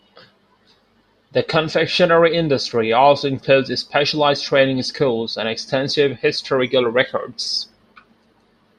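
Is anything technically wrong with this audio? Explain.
No, nothing is technically wrong with this audio.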